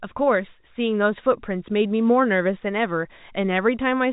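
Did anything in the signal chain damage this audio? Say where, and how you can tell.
No, the speech carries the band-limited character of G.711 A-law telephone coding, with nothing above about 3.8 kHz and at most a faint level-following noise floor from that coding, and no stage in the chain shows damage beyond that.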